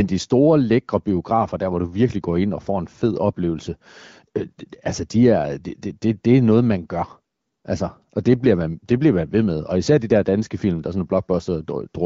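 Nothing goes wrong anywhere in this speech, which has the bandwidth and faint coded texture of an HD Voice call over the AMR wideband codec, running at a rate high enough to keep the talking clear.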